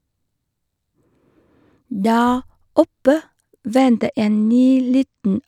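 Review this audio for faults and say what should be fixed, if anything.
Channel delay (comb filtering) runs from 3.79 s to the end of the speech. One channel lags by only a couple of samples, a few hundredths of a millisecond, so the mono sum cancels high frequencies, with the first notch near 10 kHz, leaving the top end dull. Keeping both channels sample-aligned before summing to mono, or using a single channel, prevents it.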